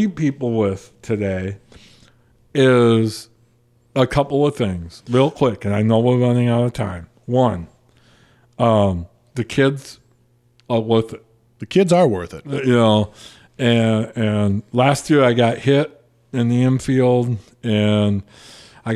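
Speech recording with nothing technically wrong to point out. No event anywhere in the audio calls for a time or a cause.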